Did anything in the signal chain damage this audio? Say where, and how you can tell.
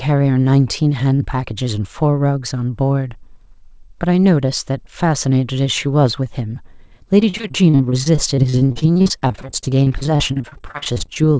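Yes, the network stage. Repeated packet loss runs from 7.2 to 11.17 s. There are 52 gaps of up to 40 ms, each patched by repeating the last sound. The speech turns choppy and robotic.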